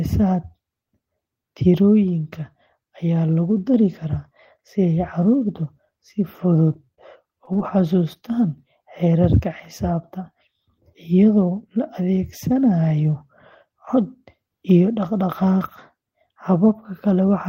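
Short concealed packet loss: about 20 ms of speech missed the decoder each time, and the receiver extended the preceding sound to bridge the gaps, at 6.73–6.77, 6.85–6.89, 6.95–6.99, 7.45–7.49 and 7.53–7.57 s, giving brief smears or wobbles.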